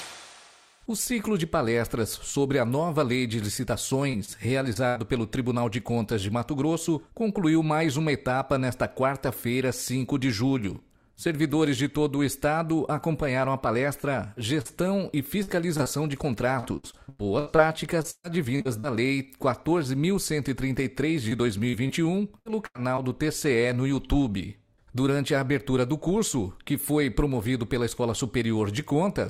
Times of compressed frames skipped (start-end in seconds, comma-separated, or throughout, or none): none